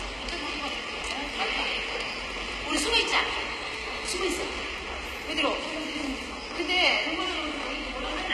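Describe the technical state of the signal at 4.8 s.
Right at 4.78 s the audio jumps forward. It sounds like a dropped buffer (overrun): about 20 ms of sound went missing and the two sides were butted straight together, so there's no gap or silence, just a skip in the flow. That points to the capture side likely not reading its samples before the hardware wrote over them.

Underneath that moment, and running through the whole clip, is plainly audible low-bitrate coding damage that sounds like HE-AAC compression. Nothing sits above 14.9 kHz, and the treble that is there has that synthetic, metallic grit you get when upper bands are likely rebuilt by copying lower ones upward rather than coded directly. The harshness fits a very low rate, in the region of 20 kbps.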